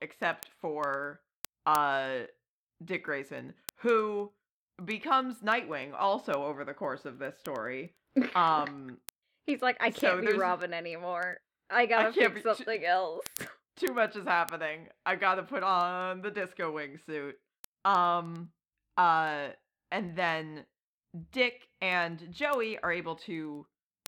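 From 0.12 s right through to 24.06 s there's a steady stream of word clock ticks, roughly ten a second and around two hundred in all. The receiving device is running on its own clock rather than locking to the sender's, and the two drift apart by something like a couple of hundred parts per million. Every time they slip past each other, a single sample gets dropped or repeated, and you hear a sharp tick over the speech.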